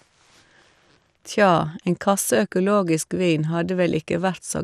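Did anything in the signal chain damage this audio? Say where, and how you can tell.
Yes. The codec stage is the likely culprit: MP2 compression starved of bits, consistent with a rate around 80 kbps. Across the whole speech clip nothing reaches above 15.1 kHz, and the sub-bands that remain are coarsely quantised, giving a dull, gurgling, granular texture.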